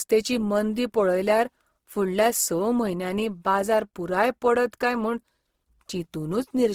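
From start to finish the speech sounds rough and grainy, with a noisy texture over voiced sounds and little swirl, and content still reaching 20.4 kHz. This is likely Opus compression in CELT mode, filling starved bands with noise, which fits about 16 kbps.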